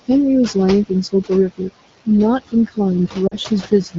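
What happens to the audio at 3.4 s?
Just before 3.4 s, from 3.28 to 3.37 s, the sound briefly drops toward near silence. These are lost AMR speech frames: about 40 ms of audio, which fits two 20 ms frames, failed their checks, so the decoder repeated its last pitch and vocal tract settings at falling gain. Throughout this moment, and across the clip, noise suppressor artifacts are present, with steady noise pulled down by about 16 dB.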